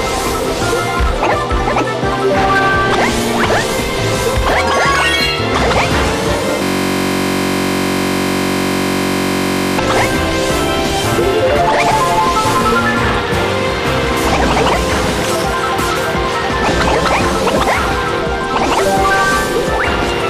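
The audio has a system hang loop from 6.63 s to 9.78 s. The computer or its audio driver stopped supplying new samples, so the playback hardware kept replaying the same 21.33 ms stretch of its ring buffer, which fits a 1024-sample buffer. Repeating that short a segment about 150 times turns into a steady, mechanical buzz at 46.9 Hz, the loop rate, until normal output resumes at 9.78 s.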